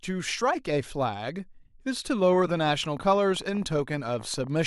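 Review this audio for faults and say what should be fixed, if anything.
A train of clicks runs from 2.22 s to 4.62 s. That is about forty clicks at 16.3 per second, unevenly spaced, roughly as loud as the speech. The likely cause is interference from nearby equipment or a faulty connection or power supply. To prevent it, shield and separate cables and check the interface.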